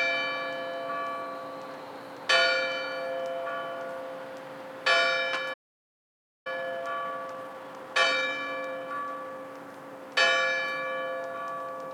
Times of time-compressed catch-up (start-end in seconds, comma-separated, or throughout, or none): 6.47-9.47